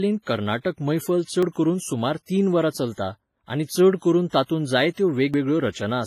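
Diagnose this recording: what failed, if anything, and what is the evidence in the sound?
Codec stage: the sound carries smeared, swirly low-bitrate artefacts and nothing above 15.4 kHz, likely low-bitrate audio saved at a high bitrate, since a genuine 256 kbit/s MP3 would not degrade like this.

Driver or buffer stage: skips at 1.43 s and 5.34 s each remove about 40 ms and splice the edges directly, with no silent gap. This is audio missing between chunks, likely from 2-second chunk boundaries, rather than a network dropout.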